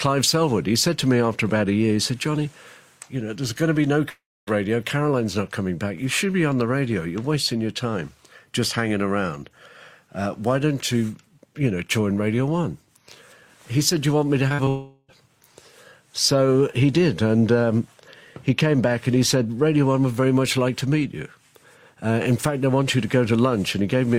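The audio cuts out twice in a pattern that points to a likely long network dropout. At 4.09 to 4.49 s, about 0.38 s is lost, smeared over, then about 0.25 s of silence. At 14.69 to 15.10 s, about 0.4 s is lost and filled by a fading continuation. Just before that second gap comes a short concealed packet loss. Brief holes at 14.49, 14.54 to 14.60 and 14.64 s were patched by the receiver, giving quick smears and wobbles.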